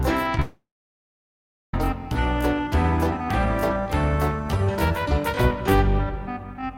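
At 0.35 to 0.38 s and again at 0.38 s, short concealed packet loss: missing fragments of about 10 ms were patched by extending the preceding sound, leaving a brief smear. From 0.40 s to 1.74 s the sound briefly continues as a fading buzz, then turns silent for about 1.1 s before resuming with material skipped, likely a long network dropout.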